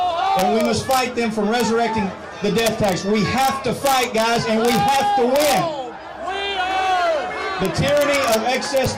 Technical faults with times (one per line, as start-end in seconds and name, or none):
0.39-0.99 integer overflow
1.60 integer overflow
2.58-2.92 integer overflow
3.38-3.48 integer overflow
3.85-5.01 integer overflow
5.36-5.59 integer overflow
7.65-8.85 integer overflow